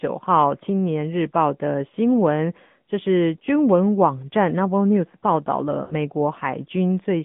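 From start to finish the speech passes through the AMR narrowband mobile codec. Its vocal-tract model, driven by sparse pulses, gives a plainly audible buzzy, synthetic edge, and the degree of damage fits a middle rate near 10 kbps. Nothing reaches below 150 Hz or above 3.5 kHz. On a spectrogram the energy sits in that band with a sharp ceiling and nothing at all above it, and the harmonics look smeared and coarse.

From 5.84 to 5.94 s there are lost AMR speech frames. About 60 ms fails to decode, which fits three lost 20 ms frames. The decoder fills the gap by repeating the last good pitch and spectral settings at falling gain, so the sound smears into a short, warbly tone that fades rather than cutting off. Speech returns thin and rough for a moment. On the waveform the level tapers down across the gap, and on a spectrogram the partials run flat and fade.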